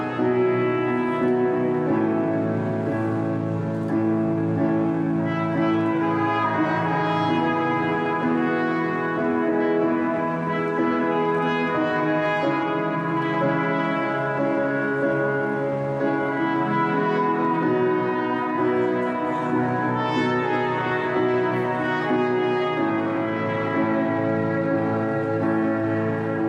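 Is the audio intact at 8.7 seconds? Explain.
Yes, at 8.7 seconds the audio is intact, with no dropout, click, distortion or other fault to be heard at that point.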